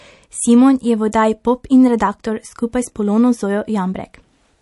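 From start to finish, the speech sounds watery and swirly. The treble is dull, and sibilants chirp metallically. This is likely MP3 compression at a starved bitrate, around 48 kbps. The encoder cuts the highs and drops weak frequency lines, which flicker between frames.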